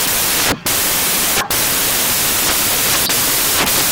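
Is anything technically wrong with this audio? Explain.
Yes. Throughout, the speech carries loud, harsh broadband noise. These are samples built from the wrong bytes: each value is assembled with its bytes misaligned or swapped, so the rapidly changing low bits become the dominant part of the signal.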